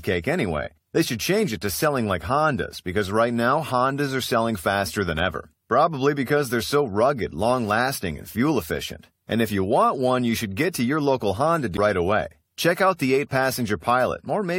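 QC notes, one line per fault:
11.77 s, CD skip: the speech mutes for a brief moment, roughly 15 ms, and resumes from a different point in the recording. The laser was knocked or hit a flaw and jumped to another turn of the disc's spiral, breaking continuity at the join.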